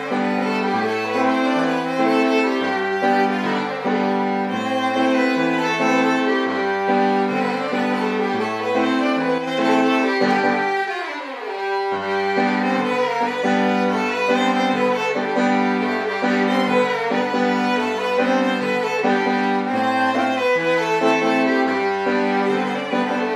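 At 9.38 to 9.47 s there's a sudden gain jump: the sound and background noise drop together by about 4 dB, likely from a gain change applied without a ramp.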